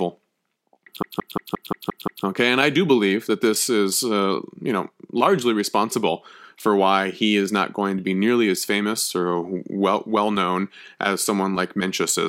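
From 1.03 to 2.25 s the speech is caught in a CD stuck on one turn: a 175 ms segment repeats seven times, each jump marked by a brief mute, giving a rapid, even stutter.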